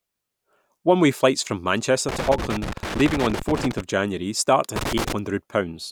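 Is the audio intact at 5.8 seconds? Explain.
Yes, at 5.8 seconds the audio is intact, with no fault to be heard at that moment.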